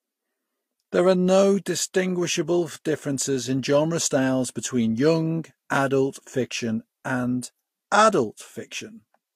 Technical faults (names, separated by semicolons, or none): transcoding between lossy codecs